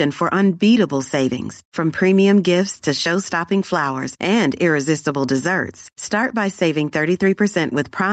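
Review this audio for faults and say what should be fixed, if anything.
Gain pumping runs through the whole speech clip. The gain swings by roughly 5 dB, pulled down under every loud syllable. The likely cause is excessive input gain driving a fast limiter. On the waveform, the envelope looks flattened, and on the spectrogram nothing appears above the 8 kHz ceiling of the call path. To prevent it, lower the microphone gain so the limiter rarely engages.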